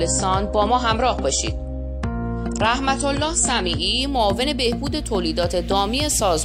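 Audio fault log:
0.0–4.0 s: adaptive stream starting at a low bitrate. Nothing above 9.8 kHz and strong codec artefacts, which fits a 32 kbit/s AAC start, then a sudden gapless step to quality fitting 96 kbit/s.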